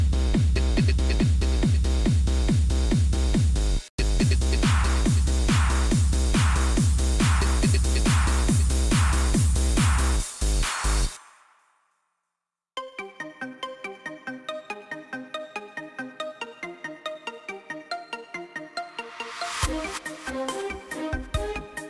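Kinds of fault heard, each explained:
No technical faults can be heard anywhere in the signal.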